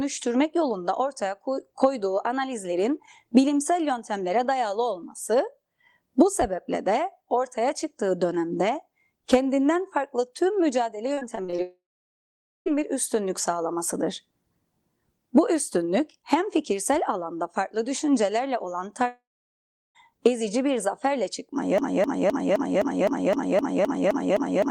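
A speech recording with four distinct faults, all from 11.1 s onward. From 11.13 to 11.60 s the sound turns choppy: repeated packet loss (robotic sound), with seven short holes, the longest 35 ms, each bridged by stretching the preceding waveform. About a third of that half-second is synthesized fill rather than real audio, and the closely spaced patches make it choppy. Immediately after, from 11.62 to 12.68 s, comes a long network dropout, the likely cause being an interruption in the incoming stream. Roughly 1.04 s of audio is missing. The concealment holds the last sound as a fading buzz for under two tenths of a second, then leaves about 0.86 s of silence before the audio resumes with the gap simply skipped. A second dropout of the same kind runs from 19.08 to 19.97 s, with about 0.88 s lost, a brief decaying tail, then roughly 0.74 s of silence. From 21.78 s to the end of the clip a broken-record loop takes over. 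A 258 ms fragment repeats back to back, identical each time, for nearly 3 s, and the original audio for that stretch is never heard. This pattern likely comes from a stalled player, encoder or stream that kept resending its last buffered piece.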